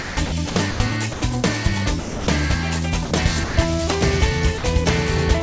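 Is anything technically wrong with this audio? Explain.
Yes. Two related problems appear, both likely from a sender's voice detector, heard through a call path that carries nothing above 8 kHz.

Sound chopped by the voice detector, 0.02 to 0.80 s: the gate repeatedly switches off and on, swapping about 360 ms of real sound for comfort noise. It sounds choppy. The waveform shows envelope gaps filled by a flat noise floor, and the spectrogram shows detailed texture alternating with smooth, featureless bands.

Sound dropped by the voice detector, at 1.13 to 1.22 s, 2.00 to 2.27 s, 3.05 to 3.11 s, 3.44 to 3.56 s and 4.58 to 4.64 s: each time, quiet sound was treated as background and not sent, so 60 to 270 ms is lost and replaced by steady noise until the sound resumes. The waveform shows sudden low, even stretches, and the spectrogram shows uniform grey blocks with no structure.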